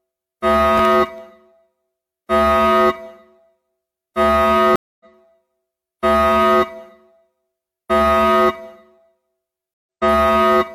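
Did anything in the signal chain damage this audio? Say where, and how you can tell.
Yes. Between 0.78 and 1.18 s, processor overload crackle in the driver or buffer stage: a handful of very short buffers, under a millisecond each, were refilled with stale audio. Unlike wiring crackle, it arrives as one gritty burst and then stops.

At 4.76 s, a stream reconnect at the network stage: 244 ms of silence, then playback resumes about 300 ms further on. A plain dropout would pick up where it stopped, but here a piece of the sound is skipped.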